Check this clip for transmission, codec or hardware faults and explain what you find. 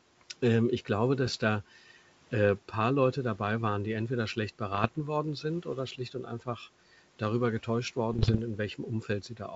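The clip shows two kinds of fault: bit errors on the ADPCM link in three bursts, and one stretch where the noise suppressor cut into the speech.

Bit errors on an ADPCM link occur at 1.27 to 1.35 s, 4.72 to 4.97 s and 8.12 to 8.43 s. Flipped bits throw off the decoder's step size and predictor, so each error rings on briefly, giving pops and rough bursts with momentary level jumps. The error rate sounds to be around half a percent to one percent, highest in the last burst.

Speech cut by the noise suppressor occurs between 5.98 and 6.48 s. The suppressor mistook part of the speech for background and turned it down along with the noise, by about 10 dB at the deepest point. Across roughly a fifth of a second, parts of the speech sound swallowed or faint.

The wideband telephone coding itself is clear up to about 7 kHz, and the room noise sits well beneath the speech.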